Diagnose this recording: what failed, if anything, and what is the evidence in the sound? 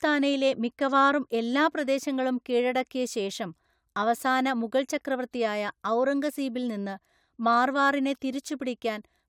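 No fault is audible here.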